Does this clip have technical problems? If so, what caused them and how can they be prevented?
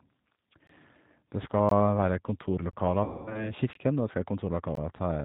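Yes. Throughout, the speech sounds muffled, slightly rough and synthetic, with nothing above 4 kHz. This is the G.729 codec at 8 kbit/s: each 10 ms frame is rebuilt from a vocal tract filter, a pitch predictor and a few pulses, so fine detail and the upper band are discarded. A wideband codec at a higher bitrate would prevent this.

Hard-edged silent holes occur at 0.67–0.69, 1.69–1.71, 2.71–2.73, 3.73–3.75 (just before "og det skal") and 4.75–4.77 s. These are gaps between chunks: the audio arrives in 1.0 s pieces, and playback leaves 20 ms of silence at each join. Buffering chunks ahead and playing them back to back, without padding, would prevent these gaps.

From 3.04 to 3.52 s the sound smears into a buzzy tone or coloured noise that fades, and stays weak and distorted for a while afterwards. This is VoIP packet loss concealed by the speech codec: about 220 ms of audio never arrived, so the decoder extended its last pitch and filter at falling gain, and the following frames took time to recover. 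A larger jitter buffer, forward error correction or redundant packets on a more reliable network path would reduce this.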